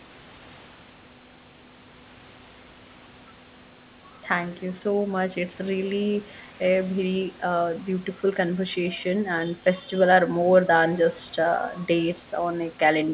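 No faults in this speech recording: the G.711 A-law call path band-limits everything to below 4 kHz as expected, and the room noise sits about 29 dB under the speech.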